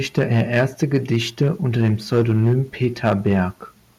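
Microphone overload runs through this speech recording in three stretches: 0.18 to 1.51 s, 1.79 to 2.53 s and 2.83 to 3.4 s. The peaks are driven about 5 to 6 dB past what the converter can represent, so their tops are flattened. That squaring-off adds a harsh, crackly grit to the loudest syllables, most densely in the middle stretch, where a larger share of the waveform is cut. The cause is likely a microphone input level set too high. A microphone volume stepped down event comes at 0.19 s, right as the first overloaded stretch begins. The voice and background drop together by about 2 dB in a single step. That pattern is likely the call software reacting to the clipping and lowering the device's input gain once, though the reduction is too small to stop the overload that follows.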